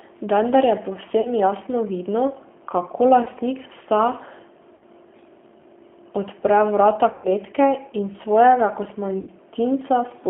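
From the start, the speech carries the rough, slightly synthetic texture of the G.729 codec, which fits an 8 kbit/s G.729A stream. The codec rebuilds each frame from a vocal tract filter, a pitch predictor and a few pulses, and the line passes only about 200 Hz to 3.4 kHz. On a spectrogram, energy stops sharply at 3.4 kHz with an empty band below 200 Hz. The harmonics look smeared and grainy rather than clean.

VoIP packet loss concealed by the speech codec interrupts the audio five times. At 1.21 to 1.31 s, 40 ms of audio is lost, which fits two 20 ms packets. At 3.24 to 3.28 s, 20 ms is lost. At 4.75 to 4.85 s, 60 ms is lost. At 7.12 to 7.29 s, the longest gap, 120 ms, is lost. At 9.21 to 9.29 s, just after "in svojega", 60 ms is lost. Each time, the decoder stretches the last pitch and filter into a buzzy tone or coloured noise that fades. The spectrogram shows a frozen spectrum that dims. 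The waveform shows a decaying stretch, and the sound stays weak briefly afterward.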